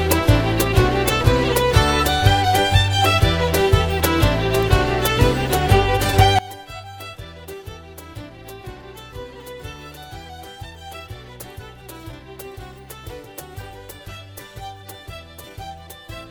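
From about 6.39 s right through to the end, the sound drops by about 20 dB and turns faint, with nearly everything the two sides share practically gone. That's the classic signature of one channel inverted, though here it's only the likely cause. With one side's polarity flipped, whatever the two channels share cancels when they're summed to mono, so all you're left hearing is the faint difference between them.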